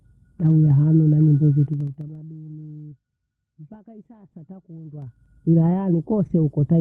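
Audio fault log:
0.45–0.51 s, lost packet rebuilt from error correction: two lost packets, about 40 ms in all, were played from the low-bitrate copies carried in the packets that followed. There is no gap, only a brief rough, noisier patch just before "hanu na nyimbo". Unlike concealment, the real sound is still there, just coarser.
3.73–3.75 s, lost packet rebuilt from error correction: a single 20 ms packet was replaced by its lower-quality backup copy. The result is a short grainy blip just ahead of "hii sasa", with the sound intact rather than smeared.
1.63–2.15 s, zipper noise: the level falls about 25 dB in 3 dB jumps at around 15 per second, with no smoothing between them. Each jump leaves a small click, so the fade carries a steady ticking. A clean fader move would glide down silently.
2.81–2.93 s, short concealed packet loss: three back-to-back 20 ms packets never arrived in time, and the decoder filled the holes by extending the preceding sound, then blended back in. 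This is heard as a smear and wobble about a tenth of a second long. Unlike the error-correction repairs, nothing of the real sound survives inside it.
4.91–5.26 s, zipper noise: right after "hii sasa" the level rises about 25 dB in 3 dB steps at roughly 20 per second. The faster stepping makes a quicker zipping texture over the rising sound, not the seamless swell of a smooth gain change.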